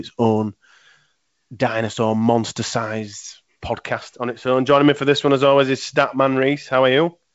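No technical faults are audible.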